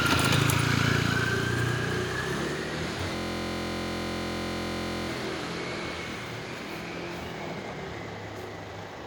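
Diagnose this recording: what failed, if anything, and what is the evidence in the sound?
A system hang loop runs from 3.16 s to 5.09 s, a failure at the driver or buffer stage. The same 23.2 ms slice of sound repeats exactly, over and over, producing a steady buzz at about 43.1 Hz instead of the moving audio. That loop length fits a 1024-sample buffer. While the host or driver stalled, the converter kept replaying the last filled ring-buffer segment. When it recovered, the sound resumed with essentially nothing lost.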